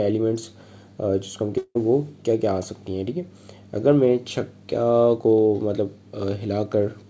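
From 1.58 to 1.77 s the sound smears into a fading buzz, then briefly goes silent and resumes with about 180 ms missing, likely a long network dropout, with the 8 kHz ceiling of the call codec present throughout.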